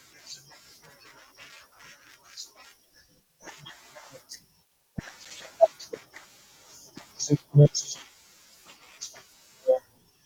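At 5.05 s the speech breaks into processor overload crackle that lasts until 5.31 s. The processor fell behind and missed a string of buffer deadlines, each gap pointing to a buffer of around 5 ms and roughly seven misses in all. Each miss dropped to silence with abrupt edges, so the quarter second sounds gritty and torn. A waveform shows short flat dropouts cut sharply into the signal. A spectrogram shows thin vertical broadband streaks at each edge.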